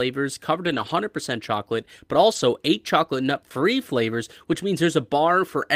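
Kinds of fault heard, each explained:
Lost packet rebuilt from error correction: packets went missing, and each was replaced by a low-bitrate copy carried in the following packet. The speech has no gaps, but briefly turns rougher and noisier around 0.65 to 0.91 s, 2.31 to 2.41 s, and 4.51 s.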